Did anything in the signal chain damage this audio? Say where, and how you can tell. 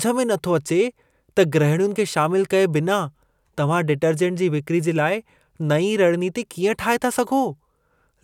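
No, nothing in the chain has marked this speech recording, and every stage from capture to playback leaves the signal intact.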